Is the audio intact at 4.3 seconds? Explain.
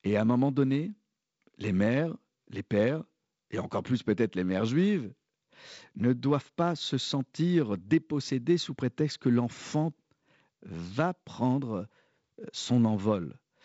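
Yes, the audio is intact at 4.3 seconds, with the G.722 wideband telephone coding running normally and its light upper-band hiss and band limit near 7.7 kHz among the traces of the codec there.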